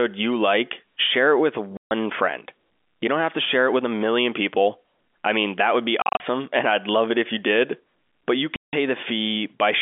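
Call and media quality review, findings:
Packet loss filled with silence: hard dropouts at 1.77–1.91 s (140 ms), 6.02–6.2 s (130 ms as several short gaps, longest 40 ms) and 8.56–8.73 s (170 ms), consistent with 10 ms packets. Jitter buffer/receiver inserting zeros: flat waveform, blank spectrogram columns, hard edges, within a 250 Hz–3.5 kHz G.711 A-law band.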